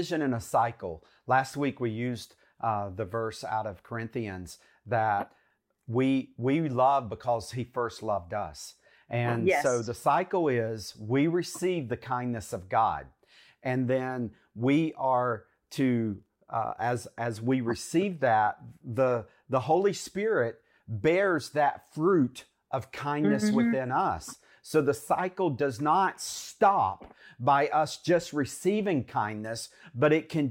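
No technical faults are audible anywhere in this speech recording.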